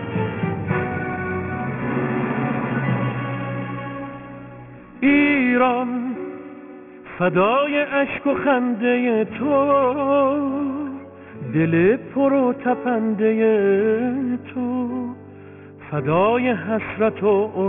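Aliasing runs through the whole clip. Everything above 3 kHz seems to have been folded back down rather than filtered out, which points to a drop to a 6 kHz sample rate from a full-band source with no anti-alias filter first. High content lands at unrelated lower pitches, fairly strong at roughly 15 dB below the real material, so bright parts come out gritty and metallic, and the spectrum stays dense right up to the 3 kHz edge.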